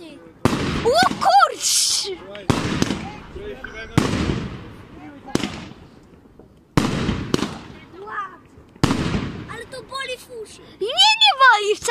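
No dropouts, clipping, glitches or other technical faults can be heard anywhere in the recording.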